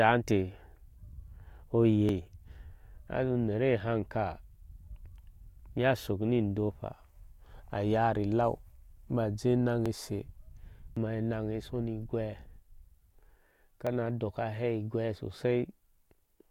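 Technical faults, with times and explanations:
2.09 s, 9.86 s and 13.87 s, dropped buffer (overrun): each is a point where the speech jumps forward, skipping something like 40 ms with no gap. That's likely the hardware overwriting a buffer before the software collected it, so the two sides get spliced straight together.
10.97 s, dropped buffer (overrun): same splice, but a bigger bite, around 150 ms, so the jump is larger.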